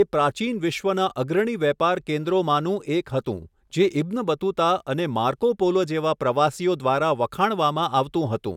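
No technical faults are audible anywhere in the speech.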